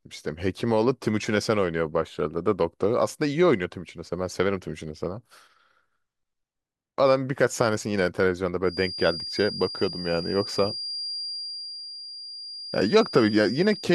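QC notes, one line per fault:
8.61 to 13.94 s, feedback whistle: a thin, steady tone at 4.8 kHz enters behind the speech and holds to the end of the clip, sitting around 10 dB below it and swelling and fading slowly in level. The likely cause is a loudspeaker-to-microphone loop poised right at the edge of feedback, sustaining one frequency without building. On a spectrogram it shows as a narrow horizontal line at 4.8 kHz; the waveform barely changes.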